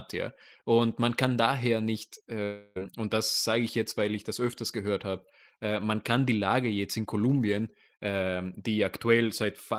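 A long network dropout runs from 2.43 to 2.78 s, right after "man kann daher nicht". The speech breaks off and a fading buzz or hiss continuing the last sound fills about 0.32 s of the gap, likely because about 0.32 s of audio never arrived, before speech resumes at "und das sage ich".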